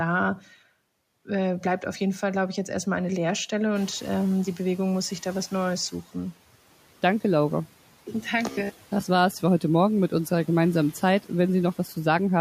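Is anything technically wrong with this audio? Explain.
Yes, two faults are audible in this speech clip.

From 3.75 to 6.01 s, the noise suppressor is catching up. The room noise jumps by about 13 dB around 4 s, and the suppressor's noise estimate takes about 2.3 s to follow. Until it does, the louder background passes through with less reduction, then sinks by about 8 dB as reduction takes hold.

From 8.47 to 9.07 s, the speech turns into a rigid, metallic buzz at 66.7 Hz. The likely cause is robotic sound from repeated short buffers: new audio arrived too late, so the system looped the last 15 ms of audio, replacing most of the real signal for that stretch.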